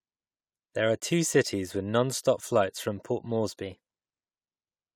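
A speech clip in which, from 3.63 s to 4.20 s, the audio abruptly runs fast and sharp: speed rises by 5.94% and pitch climbs by about 100 cents, roughly a semitone, before both snap back to normal. Because speed and pitch move together and then return in one step, this is likely a drift correction step, where clock-matching software briefly altered the playback rate to drain or refill its buffer.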